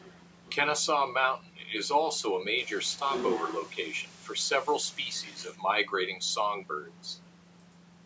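From 2.58 s to 5.43 s, the speech drops to low bit depth with dither. Each sample is rounded to only 7 bits, and noise is added first so the rounding error does not follow the signal. The error therefore turns into a steady white hiss instead of distortion. It sits at about 20 dB below the speech. The hiss is even and constant, and it reaches up to the 8 kHz top of the call band.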